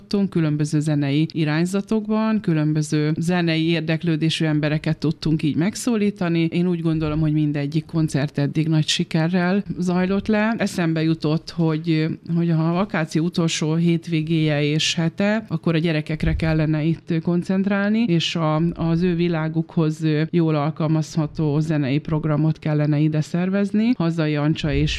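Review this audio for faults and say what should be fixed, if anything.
From 16.53 s to the end, de-emphasis applied wrongly dulls the sound. A treble cut slopes down to about 10 dB lower at 10 kHz. Apply de-emphasis only once, and only to audio that was pre-emphasised.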